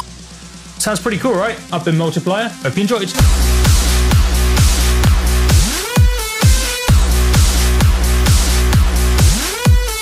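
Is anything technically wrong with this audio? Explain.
Yes. A loud pop occurs from 5.07 to 5.09 s, likely a sudden voltage step or pulse from a plug, switch, static or driver glitch entering the signal path. It lands as a single sharp pop, about 10 dB above the surrounding sound, which continues underneath.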